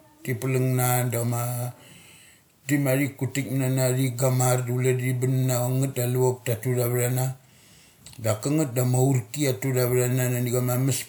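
No technical faults can be heard anywhere in the speech.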